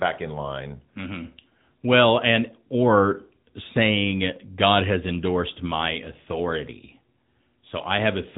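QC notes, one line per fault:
throughout, AMR narrowband mobile codec: speech sounds plainly buzzy and synthetic, consistent with 10.2 kbps AMR-NB; the spectrogram shows a hard ceiling with nothing above 3.8 kHz.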